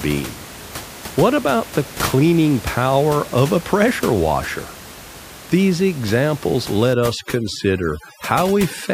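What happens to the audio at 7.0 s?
The background drops and breaks up into twinkling specks from 6.94 s to the end. It's overdone noise removal: the suppression, set too hard against room noise about 15 dB below the speech, shuts off individual frequency bands and takes quieter parts of the voice with them.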